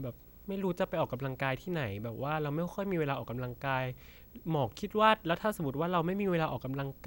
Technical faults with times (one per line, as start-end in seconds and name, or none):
0.00-7.07 video or display buzz